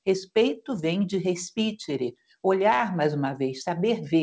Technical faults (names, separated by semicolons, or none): noise suppressor applied to music or sounds